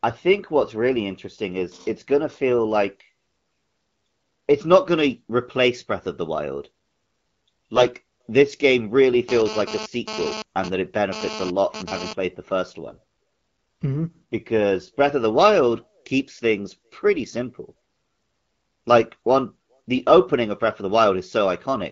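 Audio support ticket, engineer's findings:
AMR bit errors, 7.75–7.86 s (just before "this game really") and 12.88–12.98 s (just after "the first"). Weak radio link flipping a few percent of the less-protected AMR bits across a handful of frames while the core checksum still passed. Pulse positions and fine pitch/gain/spectral parameters decoded wrong. The speech keeps its pitch and loudness but goes briefly hoarse, scratchy and gargly.

GSM phone buzz, 9.29–12.13 s (after "this game really", before "the first"). Nearby 2G handset doing a data transfer and transmitting in bursts about 217 times a second; the audio circuitry rectifies the RF pulses. Heard as a hard, raspy buzz at 217 Hz with many harmonics, about 9 dB below the speech, unrelated to the talker, intermittent rather than steady. The underlying AMR-WB path is clean apart from light coding damage.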